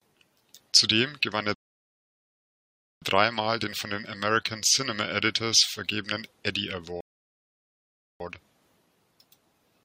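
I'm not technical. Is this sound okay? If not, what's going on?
No. There are two rebuffering stalls: the player ran out of downloaded audio and had to wait for more. The speech goes silent after "gewann er" from 1.54 to 3.02 s, and again from 7.01 to 8.20 s, then picks up exactly where it stopped. Nothing is lost, but about 1.5 s and 1.2 s of dead air are added.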